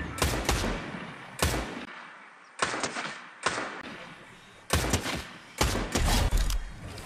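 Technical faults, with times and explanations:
1.85–3.83 s, input switched to a poorer device: After a brief gap of about 20 ms, the sound turns duller and a few decibels quieter, with nothing above 9.1 kHz and a faint new noise floor well below the signal, until it clears again at 3.83 s. The likely cause is the system's input moving to a lower-grade microphone. On a spectrogram, the top band goes empty in a sharp horizontal edge. The waveform shows a thin gap, then a smaller envelope.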